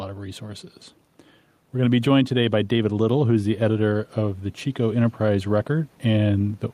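Throughout the speech, gain pumping is audible: the input gain was likely set too high, so a fast limiter clamps down on each loud syllable and releases in the pauses. The room noise sits about 43 dB below the speech, and the gain swings by around 5 dB, leaving the delivery squashed.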